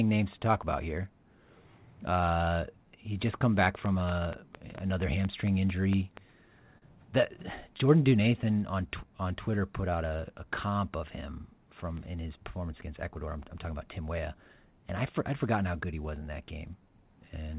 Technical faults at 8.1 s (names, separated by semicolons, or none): jitter buffer slow-down